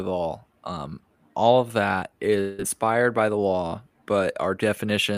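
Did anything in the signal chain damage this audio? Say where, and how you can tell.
Yes, likely a long network dropout, 2.40 to 2.61 s: a fading buzz or hiss fills the lost 0.2 s, showing as smeared, decaying spectrogram bands.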